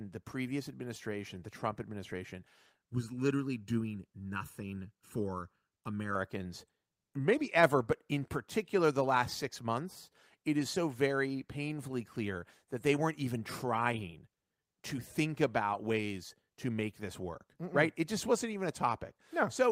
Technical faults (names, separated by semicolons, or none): channel delay (comb filtering)